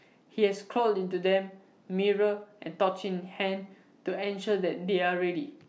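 No technical faults are audible.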